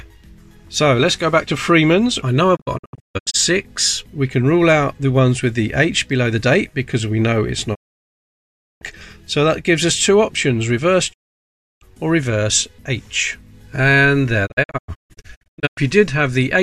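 Digital broadcast dropout mutes the audio four times. From 2.55 to 3.36 s and 14.45 to 15.79 s it breaks into short holes, the longest 0.144 s. From 7.73 to 8.83 s and 11.12 to 11.83 s it goes fully silent. Each cut fades within 20 ms. The receiver lost valid frames and muted until good ones returned.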